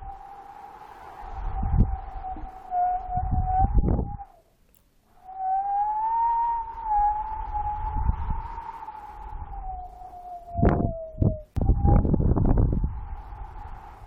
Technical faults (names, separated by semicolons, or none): none